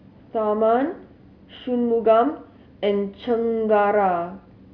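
No audible faults are present anywhere in the recording, with no interruptions, level jumps or added noise to point to.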